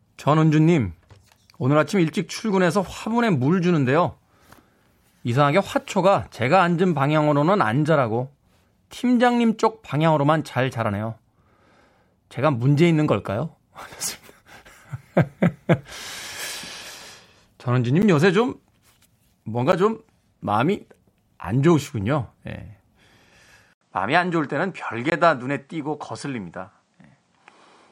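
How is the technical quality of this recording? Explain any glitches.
The recording has two kinds of glitch: three brief dropouts to dead silence, and a sudden loss of brightness near the end.

At 18.02 s and 19.72 s, then from 25.10 to 25.12 s, the sound drops out: the first two are heard as ticks or dips, the third as a short hole. These are blocks of digital silence: 10 ms, 10 ms and 20 ms of sound replaced by silence.

From 23.73 s to the end, after an 80 ms silence, the speech turns duller, with nothing above 9.8 kHz and a faint new noise floor about 50 dB down, at much the same level. The likely cause is the input switching to a poorer device with a narrower band.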